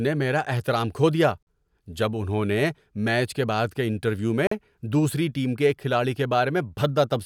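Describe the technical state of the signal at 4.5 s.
At 4.5 s the stream hits a gap between chunks: the audio was carried in 3-second pieces, leaving 44 ms of silence between them from 4.47 to 4.51 s. Between "کے بعد کے انٹرویو" and "دوسری ٹیم کے ایک" there is a short hole.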